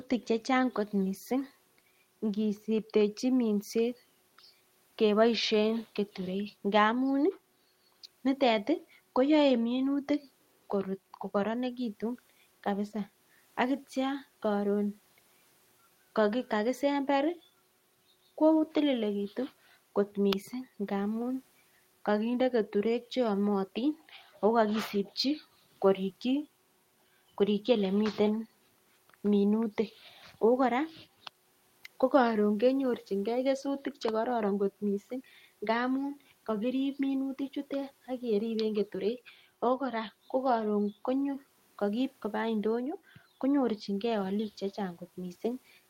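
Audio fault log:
No technical fault can be heard anywhere in the speech recording, and the signal stays steady and intact from its opening moment to its last.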